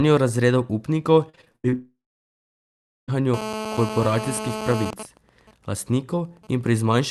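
Starting at 1.29 s and running to 1.74 s, there's repeated packet loss, and it gives the speech that choppy, robotic edge. Seven gaps land in under half a second, the longest about 79 ms. Each one gets patched by stretching the last bit of sound, so close to half that stretch is filler rather than real audio.

Right after, from 1.74 s to 3.10 s, the sound smears into a fading buzz and then goes quiet for roughly 1.1 s before picking up again, with that chunk simply missing. That's most likely a long network dropout, with the receiver concealing the start of the hole and then giving up.

From 3.34 s to 4.91 s you get GSM phone buzz: a hard, raspy 217 Hz drone full of harmonics, only about 8 dB under the speech. A nearby 2G phone on a call is pulsing its transmitter, and the audio circuitry rectifies those radio bursts into sound.

Then from 4.93 s to 6.73 s it turns into GSM signalling bursts. 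It's the same 217 Hz source, but now it's even ticks with a longer buzz twice a second. It sits well down in level, around 20 dB below the speech, and fits a phone idling through a silent stretch of a call.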